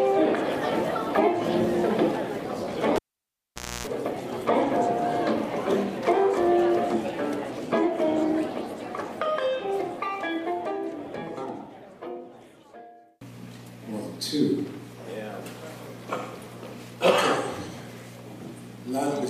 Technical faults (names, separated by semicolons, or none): cable pulled and plugged in